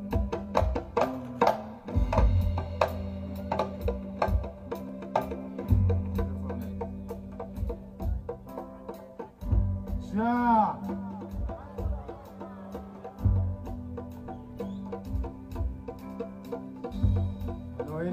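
No technical faults can be heard anywhere in the recording, and the signal stays steady and intact throughout.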